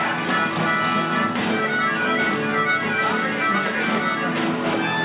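No technical faults can be heard anywhere in this audio. There is nothing here that needs a time or a cause.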